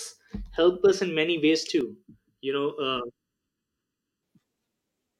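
From 1.81 s to 4.23 s, just after "us in many ways", the speech turns hollow and phasey. This is channel delay causing comb filtering. One channel lags by about 0.7 ms. Summed to mono, it cuts evenly spaced notches, the first around 700 Hz.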